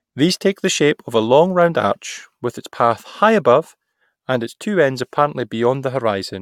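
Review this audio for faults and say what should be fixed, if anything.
No faults; nothing needs fixing.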